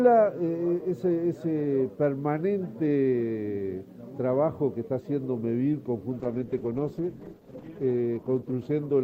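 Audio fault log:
6.24–9.03 s, call bitrate drop: the encoder was starved of bits, which fits a fall from 96 to 13 kbps, so the sound turns coarse and watery.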